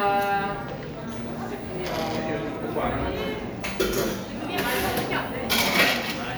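Clock drift buffer slips from 0.96 to 5.75 s in this recording of sounds: about four regular clicks every 1.59 s, likely from two mismatched clocks dropping or repeating about 15 samples.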